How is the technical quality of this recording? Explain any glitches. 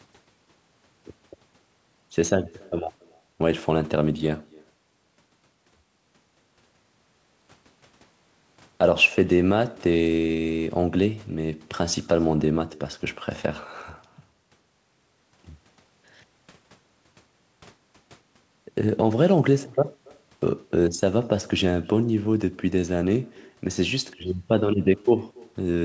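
The recording has one fault, an echo with no canceller, heard throughout the speech; the audio is wideband with nothing above 8 kHz, consistent with a G.722 call path.

Echo with no canceller: the far end's loudspeaker feeds its microphone unchecked, returning a faint copy about 28 dB down, roughly a third of a second late, trailing every phrase.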